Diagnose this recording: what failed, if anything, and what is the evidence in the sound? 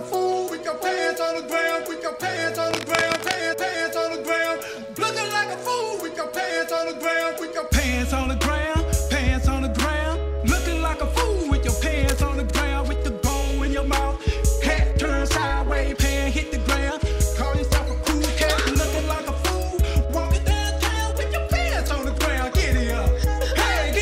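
Cable scratch noise in the analogue wiring: dense, uneven scratching at 2.71–3.36 s (about 5 dB below the signal) and 12.08–12.25 s (about 10 dB below). The likely cause is a moved, worn cable or connector with rapidly changing contact resistance. Spectrograms show ragged broadband smears, waveforms jagged noise bursts.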